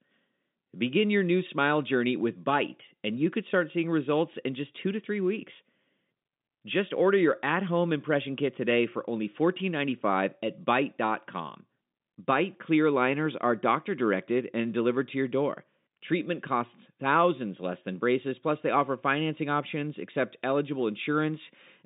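Speech over a G.711 telephone line, band-limited to roughly 150 Hz to 3.7 kHz with nothing above about 3.8 kHz; no technical faults to report.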